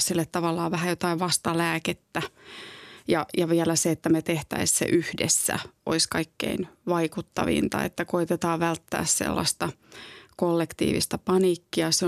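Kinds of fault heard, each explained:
No kinds of fault are heard in this speech.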